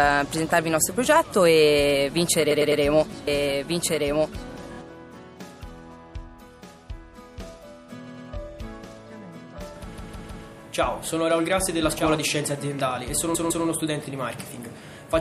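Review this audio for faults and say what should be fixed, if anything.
MP3 compression runs through the whole clip: the treble is cut off, and weak frequency components flicker in and out between frames, giving a watery, swirly texture with smeared attacks. Unlike a simple low-pass filter, the loss shifts from moment to moment. The plainly audible damage points to a likely cause of MP3 encoding at a low bitrate, around 64 kbps. To prevent it, encode at a higher bitrate or deliver a lossless file.

Repeated frames cause stutters at 2.50–2.81 s (a 104.5 ms block played three extra times), 4.72–4.77 s (a 26.1 ms block, two extra), 8.06–8.27 s (104.5 ms, two extra), 9.97–10.44 s (156.7 ms, three extra) and 13.34–13.65 s (156.7 ms, two extra). Each is a short fragment looping back to back, and the block lengths fit whole MP3 frames. A delayed copy sounds different because it plays alongside the audio rather than interrupting it. 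To prevent it, fix the buffering or transport step that writes or resends frames twice.

A doubled audio track runs from 3.27 to 12.17 s. A full-band copy about 5 dB quieter trails roughly 1.5 s behind the original, and it starts and stops abruptly with no decay or room colour. Those traits set it apart from a real echo or reverb. The likely cause is a second, slower capture path or an edit that left two copies overlapping. To prevent it, mute the duplicate input or remove the stray copy in the edit.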